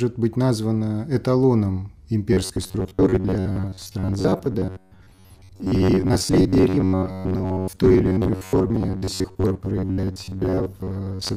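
From 2.33 s to the end, robotic sound from repeated short buffers: a rigid 93.8 Hz buzz, likely from re-playing about half the time, unlike steady tonal hum.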